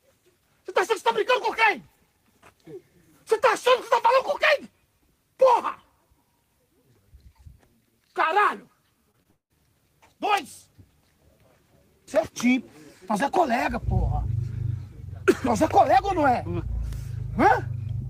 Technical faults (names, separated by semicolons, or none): short concealed packet loss; long network dropout; electrical switching spike